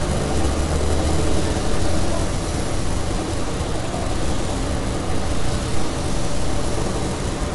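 From start to end, the likely cause is MP3 compression at a bitrate that sounds near 44 kbps. Short of bits, the encoder removed everything above 11.2 kHz and dropped weak frequency lines, leaving dull, watery, swirling audio with smeared attacks.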